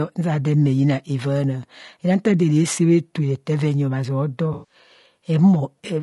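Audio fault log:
throughout: low-delay AAC compression. The speech sounds rough and grainy, with a noisy haze between the voice's harmonics and a thin, synthetic-sounding top band. The likely cause is AAC-ELD coding, whose roughly 20 ms frames blur pitch detail at a bitrate that fits around 32 kbps.
4.53–4.75 s: AAC frame loss with concealment. A smeared, noisy patch replaces about 140 ms of speech, which fits around seven lost frames. The decoder rebuilds the gap from the last good spectrum, reusing its energy with scrambled detail rather than the real signal.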